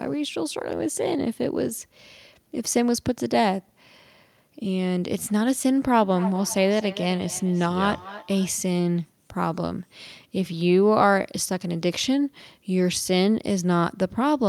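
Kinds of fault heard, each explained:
feedback echo between two devices: another device in the room replays the call into this microphone. Speech comes back roughly every 300 ms, about 16 dB down.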